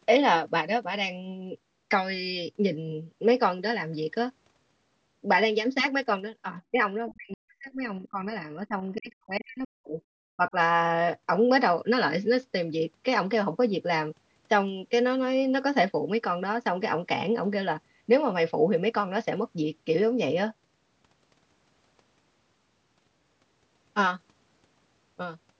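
Speech suppressed in double talk first appears at 6.71 to 6.8 s as a quick dip of roughly 15 dB, likely from an echo canceller turning down the talker while both sides spoke. From 7.09 to 7.14 s the other side's voice leaks through, a faint scrap about 25 dB below the speech, likely echo the canceller failed to remove from the microphone. Suppression returns far more heavily from 7.1 to 9.97 s: the voice drops by as much as about 40 dB and breaks up for around two seconds in total, likely the same double-talk confusion. It recurs at 10.36 to 10.55 s as a briefer dip of about 20 dB, likely again from the canceller ducking the talker during overlap.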